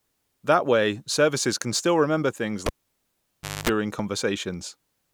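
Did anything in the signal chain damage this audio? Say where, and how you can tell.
Yes. The analogue wiring failed: a cable was pulled and plugged in. Just after "can still remember things", a pop at 2.66 s starts near silence lasting 0.98 s. A 50 Hz mains buzz of 0.23 s comes as only the tip touches. Another pop at 3.69 s restores the sound.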